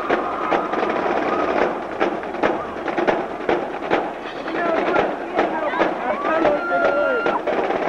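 Nothing in the audio stood out as a technical problem on listening.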